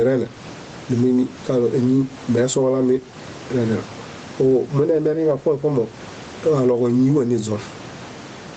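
Throughout the speech, gain pumping squashes loud and soft parts closer together in level, a level swing of around 15 dB. The likely cause is microphone gain set far too high, with a fast limiter clamping it on each peak. On the waveform, the envelope looks flattened, with loud and quiet passages squeezed together. On the spectrogram, everything sits within a band ending near 8 kHz.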